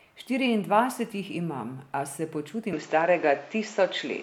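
At 2.73 s, just after "jih imam a se", the capture path likely jumps from the original microphone to a poorer input device, and stays there to the end. Nothing above 7.6 kHz survives from that point, so the speech turns duller and boxier, the level shifts by roughly 5 dB, and a new noise floor appears about 30 dB under the signal. The switch lands without any gap, so the change in tone is abrupt.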